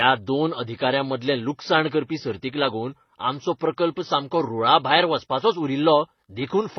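Speech, with transcoding between lossy codecs running the whole way through. Nothing is left above about 6.2 kHz, and two kinds of damage sit on top of each other: the smeared, warbly swirl of a low-rate MP3 and the breathy, slightly metallic top that HE-AAC's band replication adds. A single codec gives one consistent artefact character. This mixture points to a chain, likely MP3 then HE-AAC, each around 24 kbit/s.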